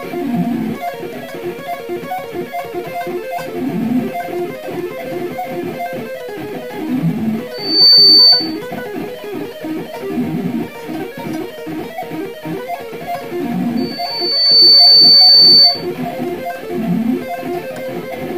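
A loudspeaker feedback squeal at 4.5 kHz swells up within about a third of a second from 7.54 to 8.59 s, then again more gradually over about a second from 13.77 to 15.87 s, rising well above the surrounding sound each time. The microphone is picking up its own loudspeaker until the loop runs away at that pitch. The self-building swell is what distinguishes it from a steady interfering tone.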